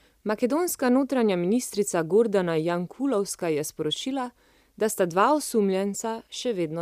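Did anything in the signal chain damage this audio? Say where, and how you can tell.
No, nothing in the chain damaged it.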